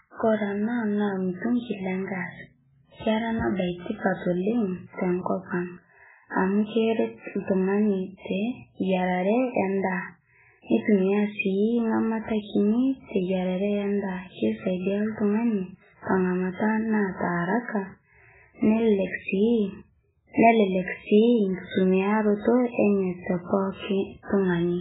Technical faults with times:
0.00-24.80 MP3 compression

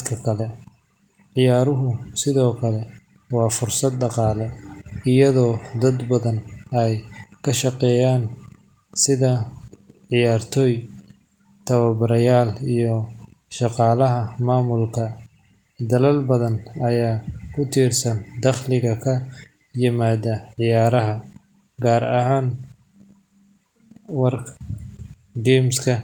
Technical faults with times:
none

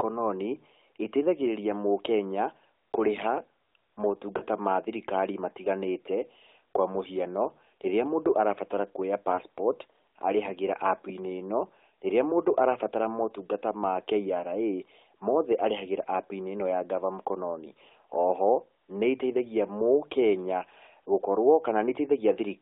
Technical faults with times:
4.38-4.43 lost AMR speech frames
9.36-9.41 lost AMR speech frames

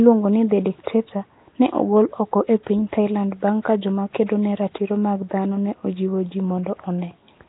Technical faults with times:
0.00-7.48 Nellymoser compression

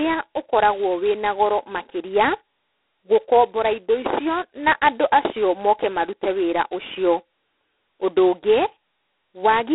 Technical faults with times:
0.00-9.74 G.726 ADPCM

